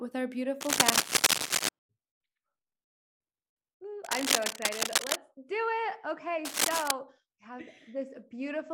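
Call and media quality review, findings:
Cable scratch noise at 0.61–1.69 s, 4.04–5.16 s and 6.45–6.91 s over the speech: dense, ragged scratching bursts, about 10 dB above the speech in the first and about 5 dB in the others. Likely a worn cable or connector being moved, its contact resistance fluctuating.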